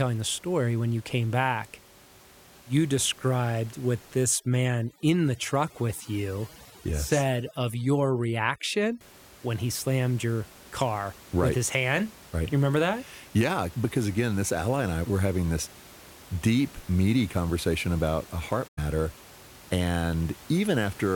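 Overdone noise removal runs from 4.23 to 9.01 s. A noise reducer set far too aggressively is clamping individual frequency bands down or shut whenever their level sits close to its noise estimate. The room noise, about 23 dB below the speech, does not just fade but drops and breaks up into twinkling specks. The quieter parts of the speech fall under the same threshold and are stripped away.

AAC frame loss with muting appears at 18.67 to 18.79 s as a gap of roughly 107 ms, which fits about five lost frames. The decoder had no data for that stretch and zeroed its spectrum. Because AAC builds its output from overlapping windows, the audio fades out and back in across the edges rather than cutting abruptly. The result is a soft-edged hole in the speech.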